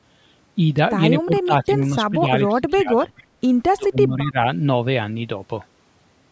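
The speech dips and breaks up four times: from 1.23 to 1.79 s, briefly from 2.1 to 2.29 s, most deeply from 2.48 to 3.3 s, and again from 3.75 to 4.38 s, falling by roughly 10 to 25 dB. This is likely speech suppressed in double talk: an echo canceller could not separate the near talker from the overlapping far-end echo and turned both down.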